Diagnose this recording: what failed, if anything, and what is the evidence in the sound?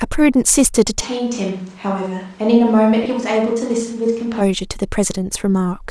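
Bluetooth LC3 compression runs through the whole clip, at the codec stage. The speech has a plainly audible breathy, grainy edge in the upper band, where detail sounds replaced by shaped noise rather than carried through. This is likely the LE Audio transform codec zeroing weaker high-frequency spectral lines and filling the gaps with noise. The amount of damage fits a 48 kbps setting with 7.5 ms frames.

A switch to a distant microphone happens at the capture stage from 1.03 s to 4.4 s. The voice suddenly turns roomy and hollow, with thinner bass, and drops by about 5 dB. Room noise rises to roughly 30 dB below the speech. At 4.4 s it snaps back to the close, full sound. The likely cause is that the close microphone's feed dropped out and a farther device, such as a camera microphone, filled in.

Lost LE Audio frames occur at the network stage from 3.03 s to 3.06 s, a gap of 22.5 ms. The speech briefly smears into a noisy blur instead of clean tone. 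The loss fits three consecutive 7.5 ms frames going missing over the Bluetooth link. The decoder covered the gap by repeating the last good spectrum with randomised signs, which keeps the energy but destroys the phase and pitch structure.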